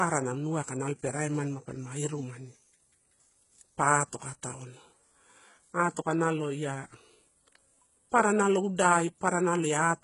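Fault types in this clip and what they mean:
HE-AAC compression: gritty, lispy s sounds and synthetic-sounding treble ending near 11.1 kHz, likely from band replication at heavy compression, consistent with about 12 kbps.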